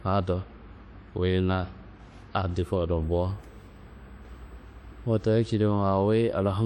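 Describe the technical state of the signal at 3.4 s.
A thin, steady whine sits under the speech from 3.02 to 5.36 s, pitched at 8 kHz with its strongest component at 16 kHz, around 45 dB below the signal. This is USB whine: the bus's 125-microsecond microframe current leaks in through power or ground. At the same moment, the sound is plainly washy and ringing, with nothing above 16.2 kHz, likely from WMA compression at a rate consistent with about 48 kbps, where long transform blocks smear quantisation noise.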